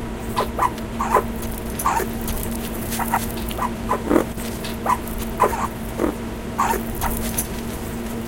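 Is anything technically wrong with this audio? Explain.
Yes. At 0.78 s an electrical switching spike is likely: a nearby switch or discharge arcing into the audio line, adding a sharp snap or tight cluster of clicks peaking around -15 dBFS over the sound.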